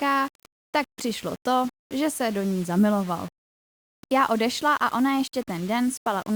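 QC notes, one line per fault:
Throughout: low bit depth without dither. Quiet syllables and tails turn gritty, with a grain roughly 25 dB under the speech that follows its level, and pauses sputter or fall dead silent. Likely 6-bit rounding with no dither. Unlike steady hiss, it vanishes when the sound stops.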